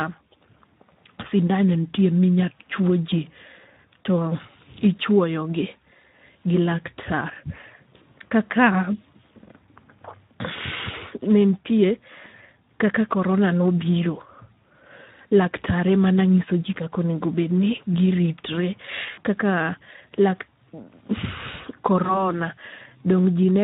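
The whole speech clip carries Speex codec damage, plainly audible. Coding at around 11 kbps leaves few bits for the excitation. The voice sounds noisy and hoarse. Any content above 8 kHz is only a shaped, noise-like fill rather than real detail.

VoIP packet loss concealed by the speech codec hits five times: 7.97 to 8.07 s, 10.91 to 10.95 s, 15.27 to 15.33 s, 19.11 to 19.21 s, and 22.03 to 22.25 s. The gaps match roughly 20 to 60 ms of missing audio. The decoder extends its last pitch and filter with falling gain. Each gap becomes a brief buzzy or coloured fade. The voice stays weak or distorted just after.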